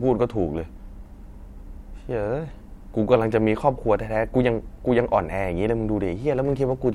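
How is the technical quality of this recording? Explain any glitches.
No technical faults are audible.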